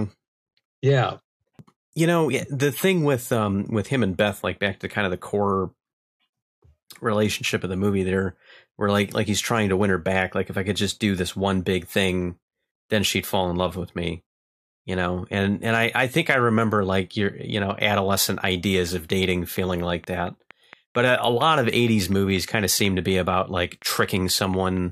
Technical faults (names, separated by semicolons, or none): train of clicks